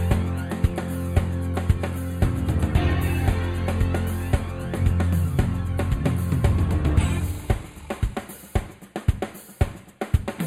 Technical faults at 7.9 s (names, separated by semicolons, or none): channel delay (comb filtering)